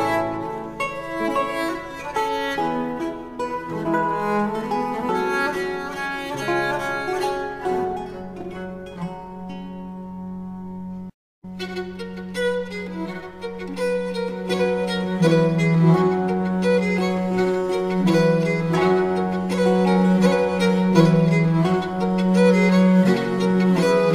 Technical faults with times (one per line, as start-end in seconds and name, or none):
none